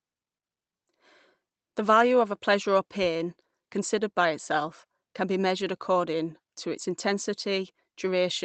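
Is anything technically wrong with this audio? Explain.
No, nothing is technically wrong with this audio.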